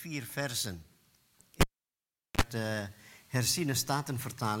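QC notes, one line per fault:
1.61–2.42 s, cable pulled and plugged in: a live cable was disconnected and reconnected mid-signal. Breaking the circuit produces a sharp pop at 1.61 s. The sound then drops to near silence for about 760 ms. As the plug goes back in, the tip touches the jack before the sleeve grounds, so roughly 44 ms of 50 Hz mains buzz leaks in. A second pop follows at 2.42 s as full contact restores the audio.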